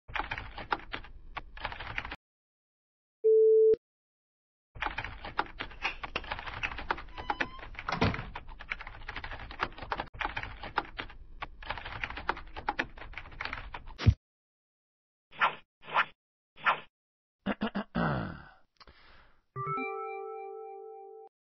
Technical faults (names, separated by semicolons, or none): none